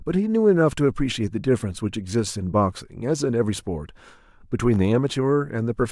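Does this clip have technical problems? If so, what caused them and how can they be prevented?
No, there are no technical faults to hear in this speech clip. With nothing gone wrong, there is nothing here that needs preventing.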